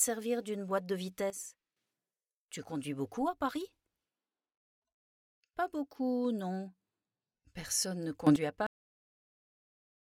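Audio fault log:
1.30 to 1.77 s and 8.27 to 8.36 s, sudden gain jump: the level drops by about 12 dB, then later rises by about 13 dB, each change instant rather than ramped. Sound and background noise shift together, likely from a gain setting applied between one sample and the next.
8.67 s, cut-off end: the audio stops mid-sound and falls straight to digital silence with no decay, remaining silent to the end. The final buffers were evidently never written or played, so the waveform is simply truncated there.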